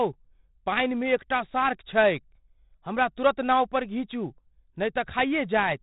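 From start to finish the speech carries 4-bit ADPCM compression, and it's heavy. Each sample is stored as a coarse 4-bit step from a predicted value, so the error rides along with the level: a gritty hiss on every loud syllable, with crunchy distortion on sharp onsets where the step size can't grow fast enough. Nothing survives above 3.9 kHz, so it's dull too, which fits a 32 kbps stream at a low sample rate.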